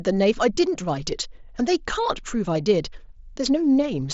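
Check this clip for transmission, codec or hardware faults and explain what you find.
No faults are present in this speech clip.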